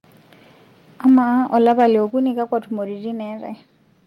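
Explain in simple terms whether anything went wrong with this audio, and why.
Around 1.07 to 1.18 s, and again from 1.66 to 1.87 s, the loudest bits turn harsh and crackly. That's likely microphone overload, where the peaks are too hot and get their tops chopped off. At 1.09 s and again at 2.1 s, the whole sound, background included, suddenly drops in level. That's likely the microphone volume stepped down by software reacting to those loud peaks, and the second drop is the bigger one.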